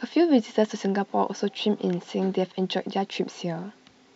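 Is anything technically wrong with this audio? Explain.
No technical faults are audible.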